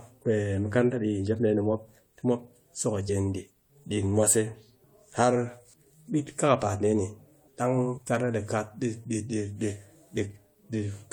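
Compressed frames were skipped twice: the decoder never received or rejected a short run of frames, so playback jumps ahead about 70 ms, roughly three frames of a codec with 21.3 ms frames. At 3.08 s, right after "mop tɨ mop so", and again from 7.97 to 7.99 s, after "kakapaat dee ni dang", the speech lurches forward.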